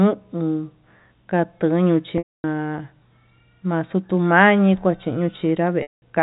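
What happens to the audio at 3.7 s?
At 3.7 s the speech carries on intact, with nothing added to the ordinary telephone-band G.711 sound it has throughout.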